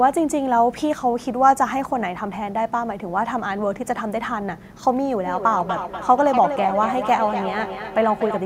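From 5.26 s to the end, speech returns every 200 ms or so. This is feedback echo between two devices: one replays audio that the other's microphone recaptures, and neither echo canceller removes it. Peaking about 7 dB below the speech, the repeats show as fainter, evenly spaced copies on waveform and spectrogram.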